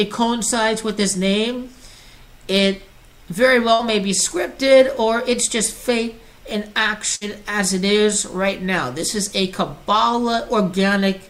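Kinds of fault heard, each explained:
Burst of packet loss: Several packets in a row went missing near 3.73 and 7.15 s. The last sound is held and faded for 57 and 59 ms, then resumes 60 ms further on.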